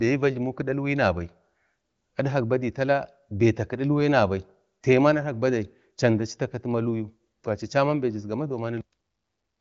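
No technical faults occur at any point in the speech, which carries the normal band-limited sound of an AMR wideband (HD Voice) codec running at 23.05 kbit/s.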